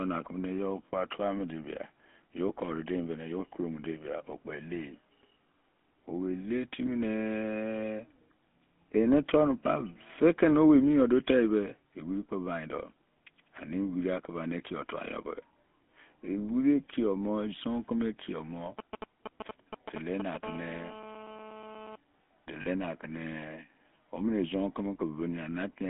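Throughout, the speech carries the buzzy, gravelly texture of the GSM full-rate codec, which fits a 13 kbps coder. It models the vocal tract and drives it with a coarse, regularly spaced pulse excitation. The band is confined to roughly 200 Hz to 3.5 kHz, and the coding damage is plainly audible.

From 18.79 to 20.44 s, GSM signalling bursts from a nearby 2G phone intrude as a galloping dit-dit-dit of short 217 Hz buzzes. The audio circuitry is rectifying intermittent radio bursts, which sit roughly 10 dB below the speech.

From 20.44 to 21.96 s, the pattern becomes continuous GSM phone buzz. The phone is now transmitting steadily at 217 bursts per second, and the rectified pulses produce a hard, raspy, harmonic-rich drone about 16 dB below the speech, unrelated to the speech itself.

At 22.62 to 22.68 s, lost GSM frames cause a brief rough, metallic ringing. The decoder repeats the last good frame's parameters to cover the gap, which fits two lost 20 ms frames, about 40 ms of missing audio.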